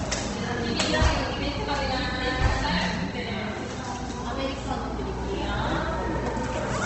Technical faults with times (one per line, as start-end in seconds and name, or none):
0.00-6.86 Opus compression